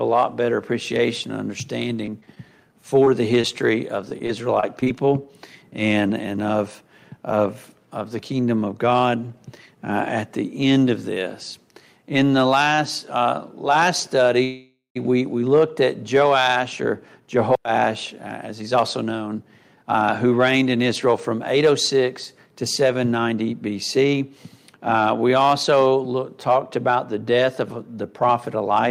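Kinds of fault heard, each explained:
Repeated packet loss (robotic sound): packets kept going missing, each hole patched by extending prior sound, so 2.05 to 4.88 s turns choppy, about 160 ms lost.
Short stall from a late packet: one packet arrived late, so the receiver stretched the last sound by 26 ms at 12.75 s, holding it slightly too long.
Call audio freeze: packets were likely held up in transit, so from 14.44 s the last sound is drawn out as a fading buzz or hiss, ending in 110 ms of silence, about half a second added.
Jitter buffer speed-up: the receiver trimmed tiny pitch-period slices to shed excess buffered delay, so 16.53 to 24.14 s runs 7% faster at unchanged pitch, sounding hurried.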